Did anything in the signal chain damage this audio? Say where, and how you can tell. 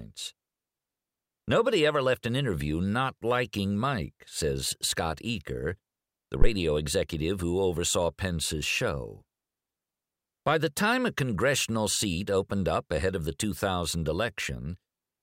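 Yes, in the analogue input stage. A phantom power thump hits from 6.42 to 6.48 s, just before "executive who oversaw". It is a deep, low thud peaking at about -8 dBFS and dying away within about 12 ms. A supply switched on or off on the live input pushed a voltage step through the coupling capacitors.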